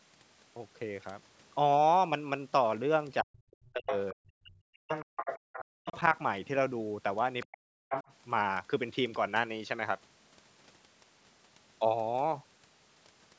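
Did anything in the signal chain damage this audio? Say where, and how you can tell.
Yes. Speech suppressed in double talk at 3.23–3.33, 3.7–5.13, 5.7–6.16 and 7.46–8.05 s: the level drops by roughly 40 dB, likely because the call's echo canceller ducks everything when both ends talk at once.

The other side's voice is leaking through at 3.51–3.98, 4.95–5.98, 7.42–7.57 and 7.91–8.12 s, about 5 to 20 dB below the talker. That's likely loudspeaker echo the canceller missed.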